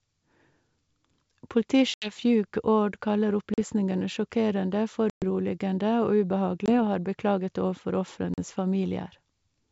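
Packet loss on an ADPCM call cuts hard-edged holes into the speech at 1.94–2.12 s, 3.54–3.59 s, 5.10–5.24 s, 6.66–6.73 s and 8.34–8.39 s. The missing stretches are about 80, 40, 120, 20 and 40 ms long. The gaps are filled with silence. The decoder's predictor and step size then no longer match the sender's, so the speech comes back slightly distorted for a brief moment before settling. The waveform shows flat gaps with abrupt edges. The spectrogram shows blank vertical bands.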